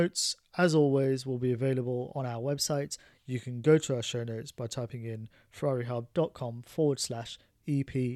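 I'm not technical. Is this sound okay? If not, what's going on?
No. From 2.20 to 3.25 s and again from 6.13 to 7.48 s, the speech suddenly plays about 5.8% faster and sounds nearly a semitone higher, then snaps back to normal. This is a drift correction step, likely software briefly speeding up playback to keep two clocks matched.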